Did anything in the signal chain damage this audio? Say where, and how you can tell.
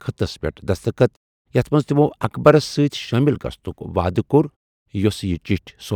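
No, nothing in the chain seems to have damaged this speech recording, and there's nothing here to point to at any stage.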